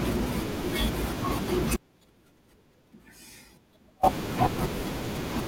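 From 1.77 s to 4.03 s the signal feed was likely interrupted while the path downstream stayed live, an audio dropout to a faint residue. For about 2.27 s the speech cuts out abruptly, leaving only a faint residue roughly 30 dB down.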